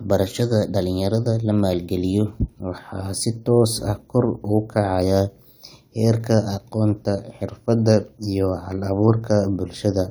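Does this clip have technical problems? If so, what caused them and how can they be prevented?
No, there are no technical problems in this speech clip. With nothing going wrong, there is nothing here that needs preventing.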